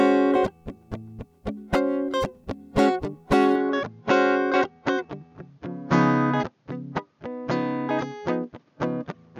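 An input switched to a poorer device is the likely cause of the change in this music clip from 3.55 s to the end: with no gap at the switch, the sound narrows to nothing above 6.8 kHz, dulls, and gains a faint new noise floor well below the music, at much the same level.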